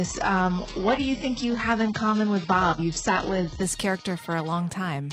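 From the start to 3.63 s the audio plays as an adaptive stream starting at a low bitrate. The player began on a lean rendition so playback could start immediately, then switched up once its throughput estimate settled. Over that first stretch nothing is present above 8 kHz, leaving the top end dull or filled in synthetically, with stronger coding artefacts that point to a very low-rate HE-AAC encode. At 3.63 s fidelity jumps abruptly without any gap, consistent with a switch to roughly 96 kbit/s AAC-LC.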